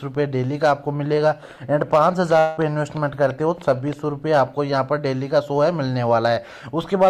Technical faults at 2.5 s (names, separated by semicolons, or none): long network dropout